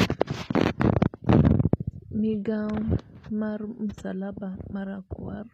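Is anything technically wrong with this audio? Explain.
Yes. Throughout the speech the treble sounds synthetic: sibilants come out gritty and lispy, and the top octave has a metallic sheen that doesn't match the body of the voice. This is likely HE-AAC compression. The codec transmits only the lower spectrum and rebuilds the highs by copying lower bands upward under a coarse envelope, so upper harmonics don't line up with the real ones. The degree of damage fits a low bitrate of around 24 kbps.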